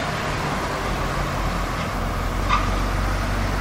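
A brief glitch cuts through the sound at 2.41 s, lasting about 14 ms. This is damaged data in a compressed stream: corrupted bytes made the decoder misread the frame there, lose sync and resume at the next valid frame header.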